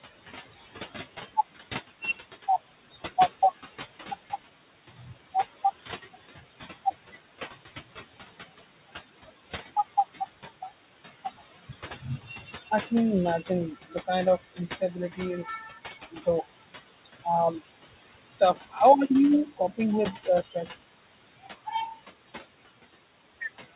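Noise suppressor artifacts run through the whole clip. The suppressor estimates the steady room noise, which sits about 16 dB below the speech, and lowers each frequency band it judges to be noise, frame by frame, by about 17 dB. The background dips in the pauses and swells back under the speech. Over the call path the band stops near 4 kHz, which points to a narrowband G.711 codec.

Speech cut by the noise suppressor appears at 11.39 to 12.5 s, just before "I can imagine", then at 14.55 to 16.27 s, 18.4 to 18.77 s and 20.25 to 20.69 s. In each span the suppressor mistook quiet parts of the speech for noise and pulled them down with the background, by about 10, 14, 13 and 11 dB at the deepest points. Only brief fragments are affected, a fraction of a second in each span, and they sound swallowed or faded.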